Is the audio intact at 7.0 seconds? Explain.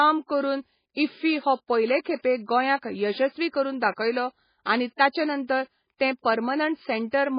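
No. At 7.0 s the speech, like the whole clip, has nothing above 5.1 kHz and a heavy watery, swirling texture, likely from MP3 compression at a very low bitrate near 16 kbps, where weak frequency lines flicker between frames. That flicker distinguishes it from a simple low-pass filter.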